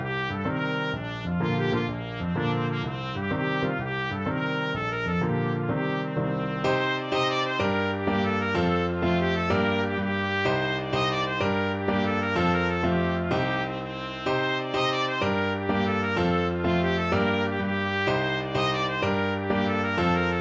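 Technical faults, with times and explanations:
No technical faults detected.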